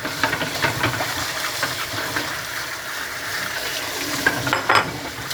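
At 5.27 s, right at the tail of the clip, a stretch of the compressed stream has been corrupted, which is damaged data in a compressed stream. Bytes in that region no longer form a valid frame, so the decoder misreads or discards it, loses frame sync and hunts forward for the next usable header. The result is a brief chirp or blip in the sound.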